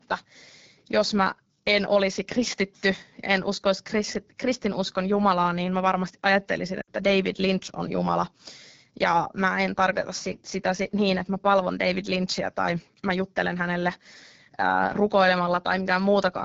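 Throughout, the speech carries plainly audible AMR wideband (HD Voice) codec damage: rough, raspy texture that fits the low 8.85 kbit/s mode. A spectrogram shows detail up to 6.4 kHz, a hazy noise band to 7 kHz, then nothing.

From 6.81 to 6.89 s, lost AMR speech frames (about 60 ms) make the decoder repeat the last sound and fade it to near silence. The waveform envelope sags, then the speech returns briefly rough.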